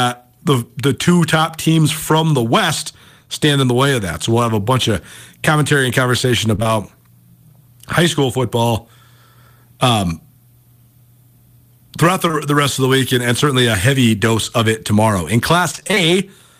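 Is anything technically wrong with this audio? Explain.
Yes. Three stretches of speech are affected by packet loss on the transmission path.

The first is short concealed packet loss. Just after "of commentary and conversation", from 6.55 to 6.68 s, the audio briefly smears and wobbles. A second spot from 12.28 to 12.35 s sounds the same. At the first spot, three 20 ms pieces of audio were lost in quick succession. At the second, two were lost back to back. Each time the receiver covered the hole by carrying the preceding sound forward, either from its pitch or as shaped noise, and then blended back into the real signal. The first spot also gained about 10 ms of length.

The second is repeated packet loss (robotic sound). From 15.71 to 16.11 s the speech turns choppy, with pieces missing. Seven gaps land close together here, the longest 23 ms, and about 140 ms of audio went missing. Each hole was patched by extending the last sound, and the next loss followed before the signal recovered. 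Nearly half of that stretch, about 48%, is synthetic fill rather than real audio.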